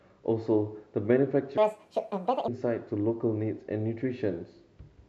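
Section at the wrong speed, 1.58 to 2.48 s: speech runs 1.72 times fast and roughly ten semitones high, likely from a mismatched playback clock.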